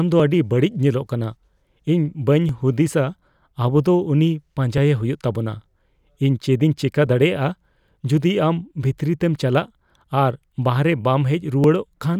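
From 0.20 s to 11.64 s a short click recurs every 2.29 s, about seven in all. These are clock drift buffer slips, likely from two clocks several hundred ppm apart, so about 70 samples are dropped or repeated each time. A spectrogram shows evenly spaced thin broadband vertical lines, and the waveform shows abrupt steps.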